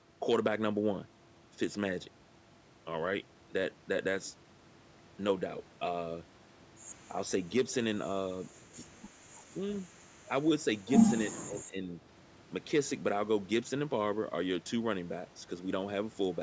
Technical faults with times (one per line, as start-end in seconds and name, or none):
9.55-9.62 speech suppressed in double talk
11.27-11.89 speech suppressed in double talk